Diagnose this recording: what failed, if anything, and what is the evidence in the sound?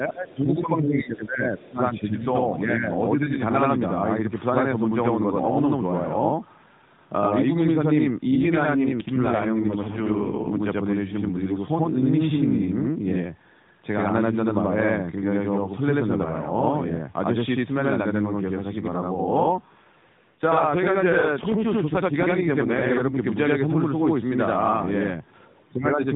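In the driver or buffer stage, one channel of this speech recording runs 85.33 ms behind the other for the whole clip, which fits a 4096-sample buffer, and the two channels are then summed to mono. The result is channel delay (doubling): every syllable is followed by an equally loud copy, heard as a slapback or doubled voice rather than reverberation, because 85 ms is long enough for the ear to separate the two arrivals.

At the call-processing stage, the echo canceller lets a brief, very faint trace of the other side's voice leak through, from 1.23 to 1.27 s. That is a 40 ms scrap sitting roughly 40 dB below the talker. Its likely cause is loudspeaker sound reaching the talker's microphone and escaping the canceller for an instant.

On the network side, the AMR rate drops from 12.2 to 5.9 kbps twice: from 8.28 to 10.50 s and from 19.44 to 23.27 s. The link forces the codec to spend fewer bits on the voice itself. 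The sound stays continuous and the band still stops at 4 kHz, as it does throughout under AMR-NB. Within those windows, though, the voice turns buzzier and more synthetic, then regains clarity when the rate returns.

Near the end, from 25.71 to 26.02 s, speech is suppressed in double talk. This is most likely the call processor's echo control turning the talker down while the far side is also speaking. Over about 0.3 s, the voice sinks by around 15 dB at its deepest and sounds ducked. It then comes back up as the clip ends.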